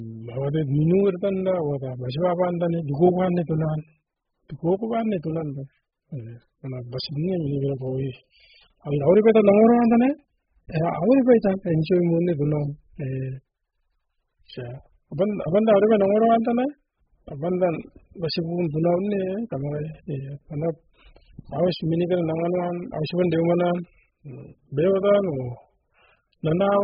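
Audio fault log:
Throughout, AAC compression: the speech sounds dull and smeared, with a warbling, fizzy edge on sibilants and heavy damage overall, likely from AAC-LC at a very low bitrate, around 8 kbps. A spectrogram shows nothing above 5 kHz.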